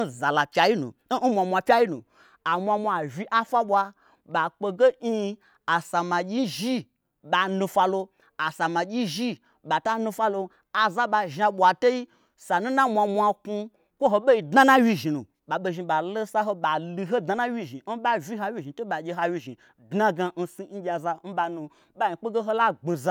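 No technical faults can be heard anywhere in the speech.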